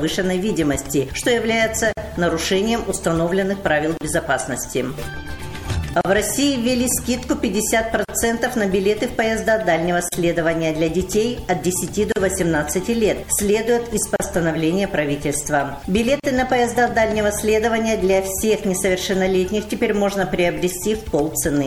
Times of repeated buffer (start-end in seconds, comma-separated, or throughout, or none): none